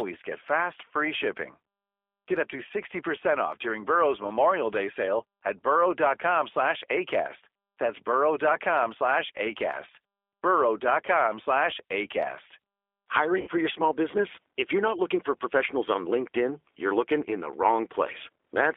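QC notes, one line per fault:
Throughout: G.729 codec. Sound is confined to about 300 Hz to 3.5 kHz and plainly rough and synthetic. This fits an 8 kbit/s model-based coder rebuilding each frame.
13.41–13.49 s: VoIP packet loss concealed by the speech codec. About 60 ms is missing, consistent with three lost packets. The decoder stretches the last sound into a fading buzzy tone or coloured noise.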